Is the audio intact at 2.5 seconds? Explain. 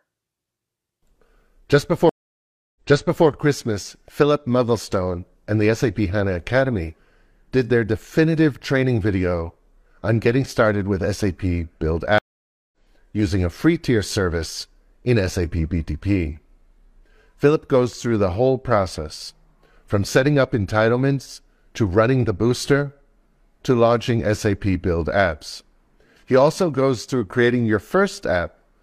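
No. From 2.09 s to 3.27 s the speech cuts out completely for 0.66 s, and when it returns it picks up 0.51 s earlier than where it stopped, so a short stretch is heard twice. This is a stream reconnect: the connection broke, the player went silent while it re-established the link, then started a fresh decoder mid-stream, and the server resent a burst of audio from just before the break.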